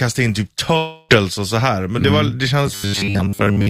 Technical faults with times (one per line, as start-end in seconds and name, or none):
0.77-1.11 long network dropout
2.67-3.70 robotic sound from repeated short buffers